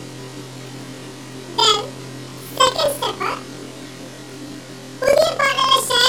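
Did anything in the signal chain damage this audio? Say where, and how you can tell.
Yes. Throughout, the sound plays an octave high with a flutter near 21.5 Hz, yet its pace is unchanged. That points to planar audio read as interleaved at the sample-format conversion stage: each 46 ms block, which fits 2048 samples, plays twice at double speed, unlike a sample-rate mismatch, which would also speed everything up.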